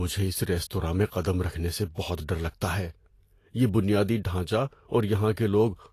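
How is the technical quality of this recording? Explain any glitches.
The technical quality is reduced by audible lossy coding throughout the speech. Across the whole clip, the sound is hissy and grainy, with nothing above 14.2 kHz, consistent with likely Vorbis compression at a low bitrate around 36 kbps. The encoder coarsely quantises the treble residue, replacing fine detail with noise-like energy, which roughens tones and softens consonant attacks.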